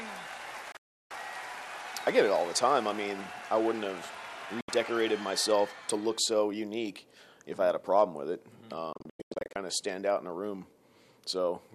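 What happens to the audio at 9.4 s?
At 9.4 s the audio is inside a digital broadcast dropout running from 8.93 to 9.56 s. The receiver mutes whenever frames fail to decode, so the sound breaks into several short silent holes, each entered with a 3 ms fade. The longest hole is 96 ms, and about 384 ms is lost in total.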